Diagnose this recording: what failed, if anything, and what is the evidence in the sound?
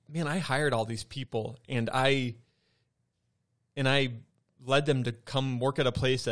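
Listening through the recording, nothing stood out at any stage of the chain.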